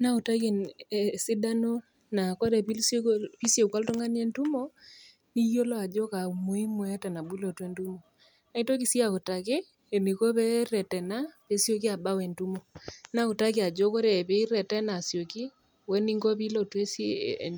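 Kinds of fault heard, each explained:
No technical faults are audible anywhere in the speech recording.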